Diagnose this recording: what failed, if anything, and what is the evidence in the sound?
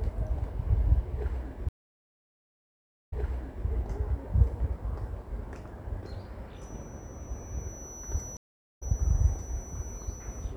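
Two stream reconnects at the network and playback stage. From 1.69 to 3.67 s the audio drops out for 1.4 s, then resumes 0.58 s earlier than where it broke off, so a stretch repeats as the server resends a burst after the connection returns. At 8.37 to 8.83 s a 0.42 s gap is followed by a jump about a fifth of a second ahead. A simple dropout would resume where it stopped. Here the restarted decoder lands at a different point in the stream.

A feedback whistle runs from 6.52 s to the end. It is a thin, steady 5.9 kHz tone sitting about 20 dB below the main sound and swelling and fading slowly in level. The likely cause is an acoustic loop from loudspeaker to microphone held just at the edge of feedback, so the tone sustains without running away. Electrical interference or a test tone would hold a constant level, and mains hum would sit far lower in frequency.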